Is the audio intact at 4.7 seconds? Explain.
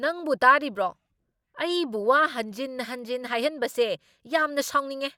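Yes, at 4.7 seconds the speech plays through intact, with no dropout, click, distortion or other fault at that moment.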